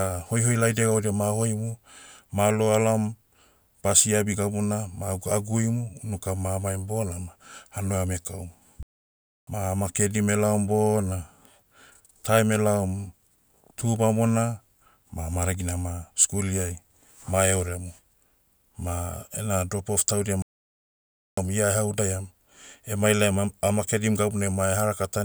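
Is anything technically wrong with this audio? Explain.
Yes, there are two playback stalls. The speech cuts to silence in mid-flow from 8.83 to 9.47 s, right after "ma hanua ame kaum", and again from 20.42 to 21.37 s, after "drop off taudia", resuming at "ia eha udaiam". The gaps last 0.64 s and 0.95 s. The likely cause is the player running short of data or having its playback thread blocked, leaving the output silent until it caught up.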